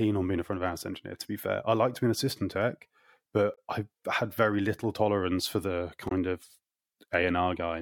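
A speech recording with two short glitches from damaged data in a compressed stream. The first runs from 3.54 to 3.58 s. The second runs from 6.08 to 6.12 s. Each lasts about 40 ms and sounds like a brief chirp, squawk, click or short hole cutting across the speech. At those points the coded data was corrupted. The decoder could not read those frames correctly, lost sync, and had to find the next valid frame before playback recovered.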